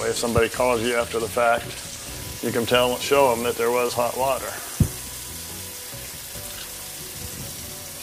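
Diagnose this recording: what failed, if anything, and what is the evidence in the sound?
A single loud pop sits at 4.58 to 4.61 s, a sharp transient about 5 dB above the surrounding audio, which continues underneath it. On a spectrogram it shows as a narrow vertical stripe spanning the whole frequency range; on the waveform, a brief isolated spike standing clear of the envelope. The likely cause is a sudden voltage step or pulse in the analogue wiring or at the driver, from a plug, switch, static discharge or driver glitch, added on top of the signal.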